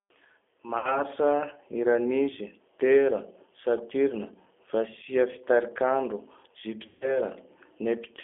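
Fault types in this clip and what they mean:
G.729 codec: the whole clip has that low-bitrate VoIP sound, likely around 8 kbit/s, with speech squeezed into roughly 300 Hz to 3.5 kHz and a plainly rough, synthetic edge.
VoIP packet loss concealed by the speech codec: around 0.78 and 6.87 s, about 60 ms and then 140 ms of audio go missing, and the decoder fills each gap with a fading guess stretched from the last sound.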